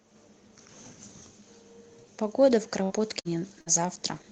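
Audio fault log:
2.83–2.93 s, 3.20–3.28 s and 3.61–3.69 s: burst of packet loss. At each point the speech briefly freezes into a held buzz or fading hiss for about 50 to 60 ms, then picks up again with roughly 60 ms missing. The receiver stretched the last sound to cover packets that never arrived. Unlike a plain dropout, there is no silent hole, and unlike a stutter, nothing repeats. The sound is concealed and then skips forward, within the 8 kHz band of the call codec.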